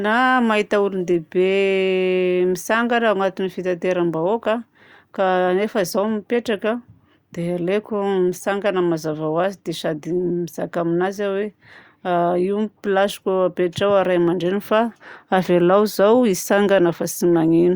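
Nothing stood out on listening to this speech recording.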